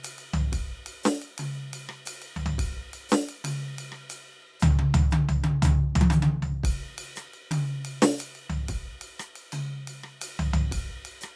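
No technical faults in this music.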